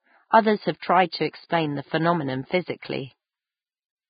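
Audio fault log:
throughout, Vorbis compression: The speech has no content above 4.9 kHz, and what remains in the upper band sounds hissy and grainy rather than detailed. Voiced tones are roughened and attacks are blurred. The likely cause is heavy Vorbis coding, which fits a bitrate of roughly 14 kbps. At that rate the codec keeps a smooth spectral envelope but quantises the residue so coarsely that fine treble structure turns into noise of similar energy.
0.31 s, 0.79 s, 1.10 s, 2.80 s, pre-echo: Each of these four attacks is preceded by a short smear of hiss lasting 24 ms, 28 ms, 32 ms and 29 ms respectively, and the onsets sound softened. The transform codec spreads its quantisation noise across the whole block. When a sharp onset lands late in a block, noise sized for the loud portion also fills the quiet interval just before it.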